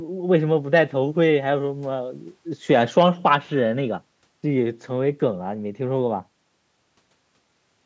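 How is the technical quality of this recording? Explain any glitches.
No glitches are audible anywhere in this recording.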